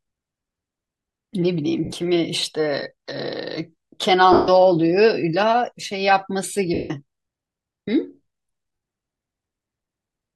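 Speech, broken four times by lost LE Audio frames: at 1.84 s (80 ms), 4.33 s (150 ms), 6.74 s (160 ms) and 8.74 s (80 ms). The LC3 decoder refills each gap by repeating the last spectrum with random signs, so voicing turns into a brief noisy smear. The lengths fit runs of 10 ms frames. On a spectrogram the harmonics blur into broadband haze, and the waveform shows a decaying, noise-like patch. The light lossy compression underneath leaves at most a faint watery texture.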